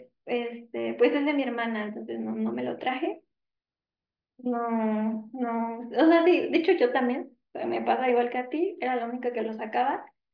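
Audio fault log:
No audible faults detected.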